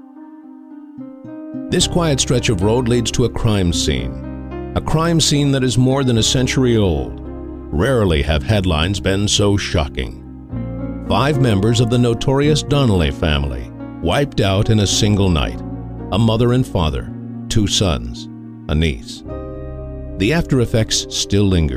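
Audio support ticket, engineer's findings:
Findings: no audio fault found in the ticket audio; nothing to attribute to any component.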